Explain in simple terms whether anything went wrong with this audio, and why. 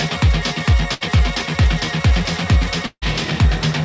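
A burst of packet loss hits from 0.94 to 1.09 s. A few chunks of the audio never arrived in time, so the receiver stretched the last sound for about 70 ms as a fading buzz or hiss, then jumped ahead, skipping roughly 60 ms.

A longer gap from 2.86 to 3.04 s is likely a long network dropout. The receiver again kept the last sound going, fading it for about 150 ms, then left about 60 ms of near silence before the audio resumed, with roughly 160 ms lost.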